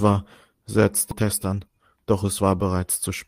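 At 1.11 to 1.13 s the speech lurches forward: the sound on one side of the join runs straight into later material with no pause or fill between them, and something like 0.7 s of speech is simply gone. This is a skip ahead. Later audio was already queued, and a stretch was dropped, either lost in transit or discarded when the jitter buffer overflowed, so playback jumped past it and the two edges were spliced almost directly.

From 1.21 to 2.43 s the talking sounds rushed, running at about 109% of normal speed while the pitch stays where it was. This is a jitter buffer speed-up. After the jump the buffer still held more audio than its target, so the receiver trimmed out many tiny slices, each one or a few pitch periods long, in quick succession. Together they remove roughly a tenth of a second and pull the delay back down.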